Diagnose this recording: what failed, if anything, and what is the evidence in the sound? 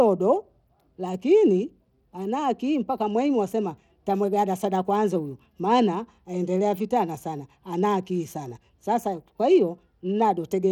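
The failure sits at the codec stage, and it runs through the whole clip. The speech carries a plainly audible gritty, coarse texture that points to Bluetooth SBC compression as the likely cause. Bandwidth holds up well, with content reaching about 20.1 kHz, so the top end isn't simply chopped off. The grit comes from the encoder quantising its sub-bands too coarsely, which fits a fairly lean bit budget of around 96 kbps.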